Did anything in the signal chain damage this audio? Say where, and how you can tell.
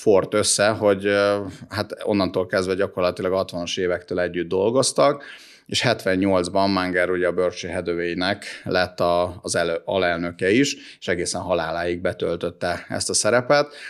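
No, nothing along the chain has left an audible mark on this speech recording, so there is no stage to point to.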